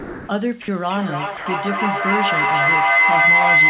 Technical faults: sound dropped by the voice detector; feedback howl

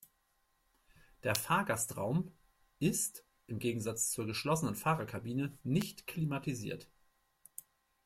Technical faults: electrical switching spike

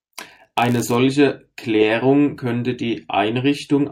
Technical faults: block size mismatch (padded)

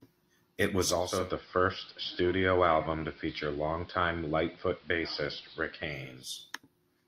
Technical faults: digital radio blending to analogue

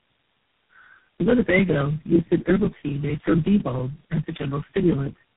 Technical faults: tandem speech coding

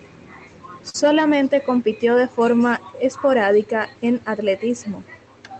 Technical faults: burst of packet loss

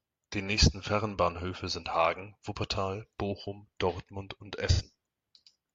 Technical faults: AAC frame loss with concealment

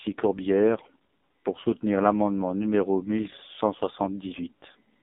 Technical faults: AMR narrowband mobile codec

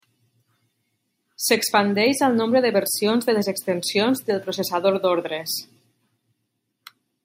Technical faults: none

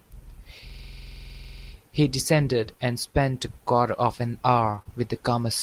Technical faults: system hang loop; repeated packet loss (robotic sound)

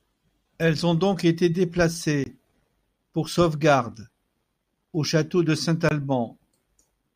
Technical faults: block of digital silence

